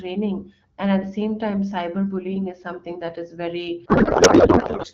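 Speech carried over AMR wideband with light coding texture, then from 3.85 to 4.86 s a codec payload misread turns it into garbled warble. Unlike dropout, sound continues, pointing to octet-aligned AMR frames read as bandwidth-efficient.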